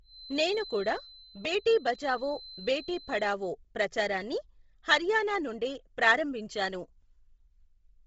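From the start until 3.39 s, a loudspeaker-to-microphone loop likely sat just at the edge of oscillation, producing a feedback whistle: a thin, steady 4.1 kHz tone roughly 20 dB under the speech, swelling and fading slowly in level and ending just before "ప్రచారాన్ని హర్యానా నుండే ప్రారంభించాను".

Throughout, the encoder likely behind this is Bluetooth LC3 compression applied heavily, stripping much of the upper spectrum and refilling it with noise, which fits a low bitrate near 24 kbps in 7.5 ms frames. Nothing sounds above 7.8 kHz, and the speech turns breathy and grainy.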